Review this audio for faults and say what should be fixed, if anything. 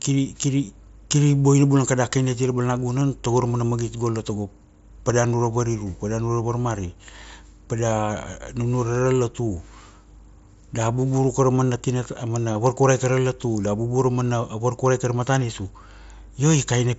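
Concealed Bluetooth headset packet loss occurs three times in the speech: at 3.00 s just after "kada kini ati ra", at 5.09 s, and at 12.54 s between "ra mana tina a" and "varkurai tara latu da". The first two gaps are 7.5 ms long and fit a single lost mSBC frame on the wideband link. The third is 15 ms long and fits two lost frames. At each point the receiver filled the missing stretch by repeating the best-matching piece of the preceding waveform. The short single patches are almost hidden, while the 12.54 s patch is long enough to leave a buzzy hold and a small warble as the real speech returns. To prevent this, reduce radio interference and distance between headset and phone, or use a link with retransmission headroom, so that packets arrive intact.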